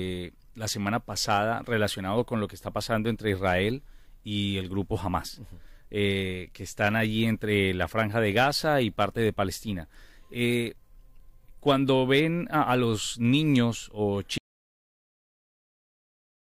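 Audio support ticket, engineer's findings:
Audio dropout to silence at 14.38 s, lasting about 2 s through to the end of the file. Speech cuts off mid-flow into silence. Likely cause: input lost upstream (device disconnect, failed link or stray mute) while the recorder kept writing. Unlike a noise gate or fade, no decay and no residual room tone. Unlike a truncated file, the length is preserved and the gap is filled with silence.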